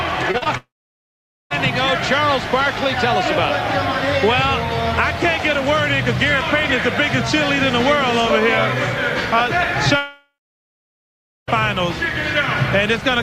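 Short concealed packet loss occurs three times in quick succession, at 0.31–0.36 s, 0.38–0.44 s and 0.44–0.47 s. About 20, 40 and 20 ms of audio failed to arrive in time. The decoder extrapolated the preceding sound across each gap, so the sound smears and wobbles briefly before rejoining.

From 0.57 to 1.52 s, the sound continues as a fading buzz or hiss, then drops to silence for about 0.85 s and resumes with material missing, likely a long network dropout. The same happens at 9.96–11.61 s, where the concealment fades out and silence lasts about 1.19 s before the audio returns.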